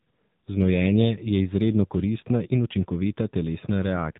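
From the first moment to the last, the speech has gone through the AMR narrowband mobile codec, the old 2G/3G phone coder. Everything above 4 kHz is gone, so the voice sounds boxed-in and dull, and the codec rebuilds it from a vocal-tract model fed by sparse pulses. The damage is plainly audible: a buzzy, synthetic edge that points to one of AMR-NB's lower modes, something around 7.4 kbps.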